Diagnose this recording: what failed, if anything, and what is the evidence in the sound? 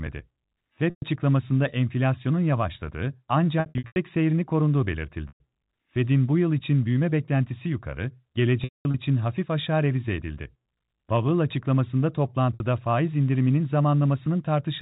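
The network stage failed, with packet loss concealed by pitch repetition. Gaps occur at 0.9, 3.6 to 3.96, 5.28, 8.64 to 8.94 and 12.54 s. The short ones, about 120 ms and 60 ms, sound like a briefly held, buzzy tone. Between "enflasyonun yavaşladığı" and "seyrini korunduğu", losses are scattered over 360 ms. After "için büyüme beklentisi yukarı", a 210 ms run fades toward silence. The receiver repeats the last pitch period and fades it out. The loss lengths fit 30 ms packets. The G.711 telephone band sounds intact.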